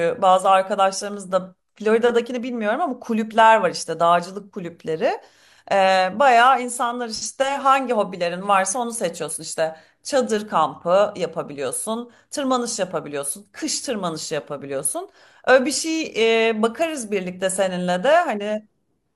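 No technical faults can be heard anywhere in the recording.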